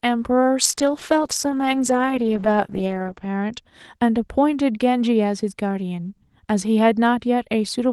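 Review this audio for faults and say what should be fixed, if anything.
From 0.63 to 3.67 s there's a call bitrate drop. The speech turns rough and muffled, and the top end narrows from 12 kHz to 8 kHz for roughly 2.7 s. That fits Opus being squeezed from around 32 kbps to around 10 kbps. Keep a higher bitrate floor and smooth the bandwidth estimator so brief congestion doesn't starve the encoder.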